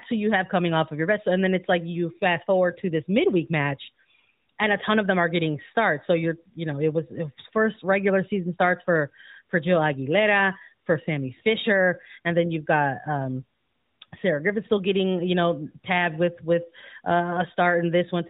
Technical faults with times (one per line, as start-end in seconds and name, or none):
none